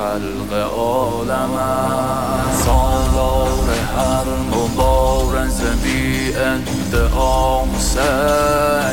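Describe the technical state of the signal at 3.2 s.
At 3.2 s the signal carries a stuck bit, present throughout the clip. One data bit likely stays fixed, offsetting about half the samples by a step near -30 dBFS. This gives harsh, buzzy distortion.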